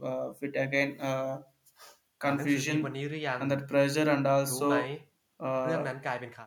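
No technical faults are audible anywhere in this recording.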